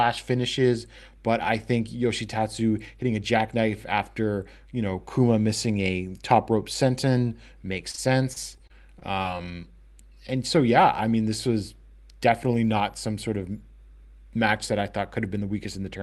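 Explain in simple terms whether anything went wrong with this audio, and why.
Repeated packet loss (robotic sound) hits from 7.91 to 9.43 s, after "top rope senton makes". Eight short dropouts get patched with copied sound, so it turns choppy.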